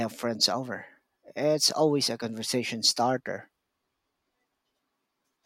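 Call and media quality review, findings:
No audible defects found in the speech signal; the capture, transport and playback chain shows no fault for this call segment.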